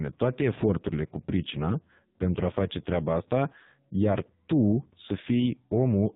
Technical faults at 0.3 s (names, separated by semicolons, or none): AMR narrowband mobile codec